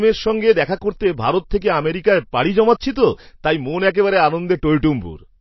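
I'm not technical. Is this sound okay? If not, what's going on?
No. MP3 compression damage runs throughout the clip: the speech sounds watery and swirly, with nothing above 5.8 kHz, so s sounds lose their crispness. The likely cause is an encoder starved of data, dropping the treble and faint details that flicker in and out.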